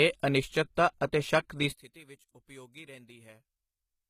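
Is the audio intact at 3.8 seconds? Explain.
No. From 1.72 s to the end of the clip, the sound collapses to a faint residue about 23 dB down when heard in mono. The likely cause is one channel inverted: with one side's polarity reversed, the centred speech cancels and only the small difference between channels survives.

Across the whole clip, including 3.8 s, the treble sounds gritty and lispy, with nothing above 14.9 kHz. This points to HE-AAC compression at a bitrate around 20 kbps. Spectral band replication rebuilds the upper band from copied lower bands, so its harmonics don't line up with the real ones.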